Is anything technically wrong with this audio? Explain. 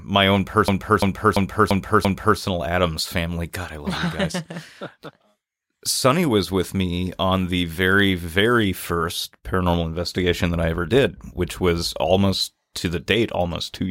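Yes, there's a system hang loop right after "my own", running from about 0.68 s to 2.39 s. The machine or its audio driver stalled while the hardware kept replaying the same ring buffer, so one 341 ms slice of speech repeats exactly five times, which fits a 16384-sample buffer. At under three repeats a second (2.93 Hz) it comes across as a stuttering, stuck-record jolt rather than a buzz, and virtually no audio goes missing around it.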